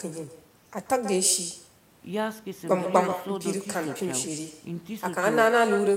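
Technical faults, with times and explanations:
Throughout, echo with no canceller: the speech is shadowed by a quieter, thinner copy arriving roughly 150 ms later, about 11 dB down. The far end's loudspeaker feeds its microphone. Nothing cancels it, so the talker returns after the network round trip.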